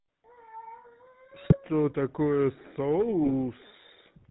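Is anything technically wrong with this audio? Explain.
Yes. The speech is coded throughout with the GSM full-rate codec, and it has two bursts of GSM bit errors.

The full-rate coding runs the whole clip. The codec models the vocal tract and excites it with a sparse, regular pulse train. Only a third of the excitation samples survive. Nothing above 4 kHz gets through. The result is a plainly audible buzzy, gravelly roughness over every voiced sound. The quality fits the old 13 kbit/s full-rate coder.

The GSM bit errors fall from 1.44 to 1.61 s and from 3.24 to 3.33 s. Here corrupted bits reach the decoder. Damaged filter, pitch or gain values warp the spectrum or spike the level frame after frame while each burst lasts. The speech breaks into squawks, pops and gargling. Each burst sounds like a handful of hit frames. That fits an error rate of around 2 percent on a weak link.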